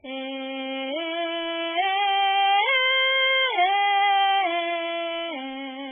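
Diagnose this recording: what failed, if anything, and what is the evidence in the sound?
The failure sits at the codec stage: this music carries heavy MP3 compression damage from start to finish. Nothing survives above 3.5 kHz, so the treble is gone and the sound turns watery and swirly as weak frequency lines drop in and out between frames. A spectrogram would show a flat ceiling at 3.5 kHz with speckled, flickering gaps beneath it. Damage this severe fits a very low bitrate, likely around 8 kbps.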